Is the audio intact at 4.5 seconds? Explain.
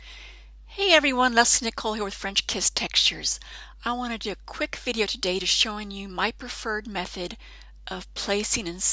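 Yes, at 4.5 seconds the audio is intact, with no dropout, click, distortion or other fault at that point.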